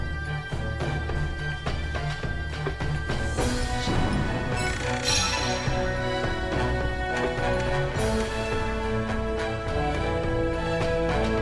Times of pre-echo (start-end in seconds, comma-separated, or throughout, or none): none